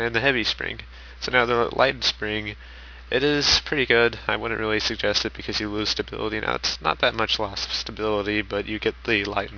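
Aliasing runs through the whole audio. High content folds back around 5.5 kHz into gritty, unrelated tones, fairly strong against the signal. This fits downsampling to about 11 kHz without an anti-alias filter.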